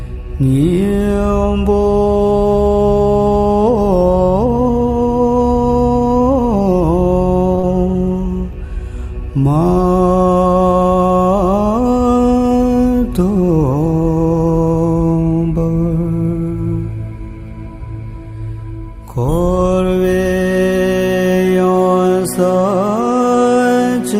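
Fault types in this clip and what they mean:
Short stall from a late packet: at 7.55 s a late packet emptied the jitter buffer, so the last sound is held about 22 ms, nothing lost, before resuming.
Short concealed packet loss: at 7.60 to 7.65 s about 40 ms never arrived; the receiver extended the preceding sound to cover it, leaving a brief smear.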